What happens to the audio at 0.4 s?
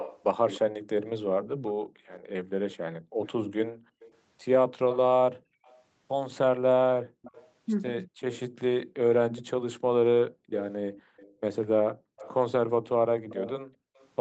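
At 0.4 s an echo leak is under way, lasting from the start to 14.1 s. A faint copy of the speech trails it by 238 ms, roughly 15 dB down, likely residue a far-end echo canceller missed. Spectrograms show the speech's harmonics repeating faintly, a quarter-second late.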